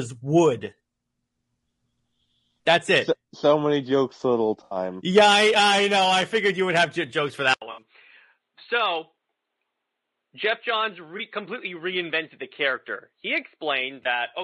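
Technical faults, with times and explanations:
Throughout: low-delay AAC compression. The speech has a rough, grainy texture, with noise filling the gaps between pitch harmonics and a thin, somewhat synthetic upper band. This is likely AAC-ELD at around 32 kbps. The codec's short frames give it poor frequency resolution, so harmonics smear, and at this bitrate the top band is rebuilt from coarse parameters. The result is plainly audible coding damage across the whole clip.
4.64–4.77 s, 7.71–7.81 s, 11.17–11.21 s, 14.03–14.06 s: AAC frame loss with concealment. Each event is a brief smeared, noisy or phasey patch. The missing audio lasts 80 ms, 60 ms, 20 ms and 20 ms, which fits runs of about four, three, one and one lost frames. The decoder fills each gap from the last good spectrum, with sign-scrambled or interpolated energy. These gaps are short, so none decays to silence.
7.54 s to end: input switched to a poorer device. 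The sound goes silent for about 80 ms, then returns duller and boxier, with nothing above 4.3 kHz. The level drops by about 5 dB, and a faint new noise floor appears roughly 55 dB below the signal. The cause is likely a change of input mid-recording to a narrower-band microphone or headset call profile. That device has its own bandwidth, tone, gain and background noise, which persist to the end.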